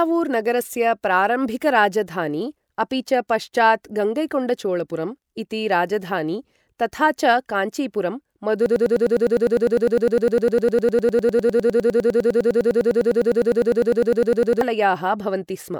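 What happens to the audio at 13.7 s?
At 13.7 s the speech is stuck in a broken-record loop that runs from 8.66 s to 14.61 s: a 101 ms fragment repeats back to back, 59 times, giving a rapid, mechanical stutter. The likely cause is a stalled player or stream resending the last piece it held, so the speech meant for those six seconds is lost. Unlike an echo, nothing decays or overlaps. Each repeat is identical and abutting.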